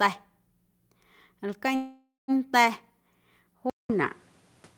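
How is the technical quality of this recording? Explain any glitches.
The recording has two clear glitches.

From 1.75 s to 2.31 s the speech stops moving forward. The last sound hangs on as a fading buzz, then drops to silence for about 190 ms. Speech then resumes exactly where it left off, with nothing lost. This is likely a call audio freeze. Packets arrived late and the jitter buffer ran dry. The receiver filled the wait with about 527 ms of invented sound. Everything after it now runs that much later.

At 3.70 s there is a silence of about 200 ms. The sound that follows runs to the end and is different. It is duller, with nothing above 12 kHz. The level shifts by about 5 dB. A new noise floor sits about 40 dB below the speech. The likely cause is an input switched to a poorer device mid-recording. The new microphone has a narrower band and its own tone, gain and background noise.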